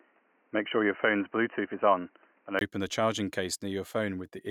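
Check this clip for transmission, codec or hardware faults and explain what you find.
The recording begins on what is likely a poorer input device, with the input switched to a better one at 2.61 s. Until then nothing above 3 kHz gets through, and the sound is dull and boxy over a faint noise floor. A 20 ms gap comes just before "the charging", then fuller, clearer sound with no obvious level jump.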